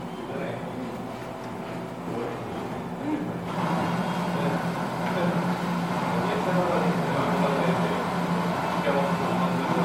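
Throughout the clip the sound is swirly, smeared and hollow, with blurred attacks and nothing above 19.9 kHz. This is generation loss, likely from roughly seven MP3 passes near 96 kbit/s, each requantising on a shifted frame grid so noise and spectral holes accumulate.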